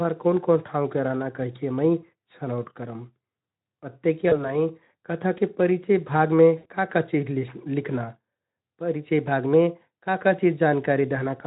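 At 4.29 to 4.58 s and 6.57 to 6.67 s the speech smears into a brief buzzy tone or coloured noise that fades: VoIP packet loss concealed by the speech codec, covering gaps of 20 and 80 ms with decaying extrapolation.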